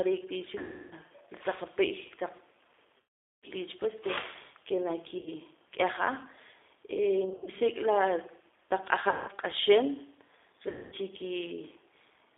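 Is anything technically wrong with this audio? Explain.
Yes. Throughout, the speech carries G.729 codec damage: it is confined to roughly 300 Hz to 3.6 kHz, with a rough, synthetic edge typical of an 8 kbit/s G.729 stream. The codec rebuilds each 10 ms frame from a filter, pitch predictor and a few pulses, discarding finer detail.

VoIP packet loss concealed by the speech codec occurs at 0.58–0.94 s, 2.99–3.47 s, 5.18–5.32 s, 7.25–7.50 s (short gaps scattered over 220 ms, none longer than 50 ms), 9.09–9.31 s and 10.69–10.95 s. The decoder stretches its last pitch and filter into a fading buzzy tone or coloured noise, and the speech stays weak briefly afterwards.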